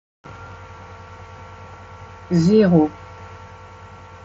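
No technical fault can be heard in this speech clip. It comes through a Bluetooth mSBC headset codec working normally, so the sound reaches up to about 8 kHz with a light grainy edge on louder passages, as that wideband codec gives.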